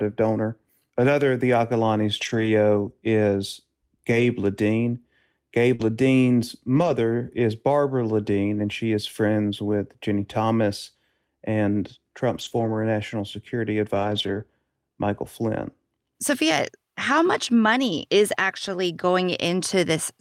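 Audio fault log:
2.17–2.47 s, 4.11–4.25 s, 5.79–5.85 s, 6.75–6.93 s, 12.37–12.75 s (just after "national security") and 13.95–14.41 s (just before "national security"): lost packet rebuilt from error correction. In each stretch the audio continues with no gap but turns coarser and noisier, because the decoder plays a low-bitrate copy that travelled in the following packet. The rebuilt spans run from 40 ms to 240 ms, in steps that fit 20 ms packets. Unlike concealment, there is no smear or repeated pitch, just a rougher version of the real audio.
5.75–5.81 s: short concealed packet loss. About 40 ms never arrived. The decoder extended the preceding sound for about 34 ms and then cross-faded back into the real audio, which produces a brief smear or wobble. The run of error-corrected audio at 5.79 s follows immediately. The two can be told apart because concealment invents a continuation of the earlier sound, while error correction plays a degraded copy of the real audio.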